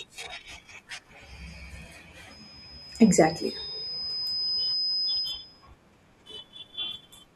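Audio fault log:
2.30–5.68 s, loudspeaker feedback squeal: a single pure tone at 5 kHz rises out of the speech, swelling over roughly two seconds until it sits about 5 dB above the talker, then holds until it stops at 5.68 s. The microphone is hearing its own loudspeaker, and at this one frequency the loop gain tops unity, so the tone feeds itself. Unlike steady electrical whine or hum, it grows from nothing rather than being present at a fixed level.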